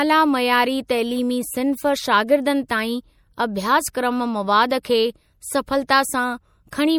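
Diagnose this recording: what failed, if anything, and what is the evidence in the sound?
The codec stage failed, and MP3 compression is the likely cause. The damage is plainly audible across the whole speech clip, from start to finish. Weak frequency detail switches on and off from frame to frame, giving a watery, swirling texture. S sounds turn metallic and chirpy. Onsets smear. This fits a low bitrate of about 64 kbps. At that rate the encoder lacks bits, so it drops the quiet spectral lines its hearing model treats as unimportant.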